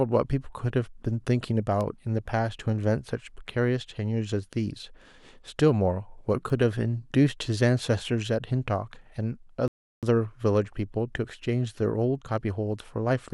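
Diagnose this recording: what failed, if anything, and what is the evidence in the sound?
Two bit error spikes come from the digital storage or transfer stage. At 1.81 s a brief run of about three samples, and at 6.50 s a single sample, each jump off the speech waveform and snap straight back, giving a sharp tick. A flipped bit shifts a sample's value by a power of two, so the error has nothing to do with the signal. On a waveform each is a lone vertical spike; on a spectrogram it is a hairline stripe running top to bottom.

A rebuffering stall at the playback stage runs from 9.68 s to 10.03 s. The speech cuts to dead silence for about 349 ms, then continues exactly where it stopped, with nothing skipped. The player exhausted its downloaded audio, paused until more arrived, and then resumed, so the recording gets longer instead of losing material. The waveform shows a flat, silent segment, and the spectrogram shows an empty column with clean edges on both sides.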